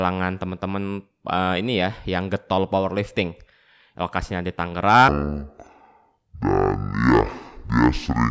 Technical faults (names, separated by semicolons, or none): wrong sample rate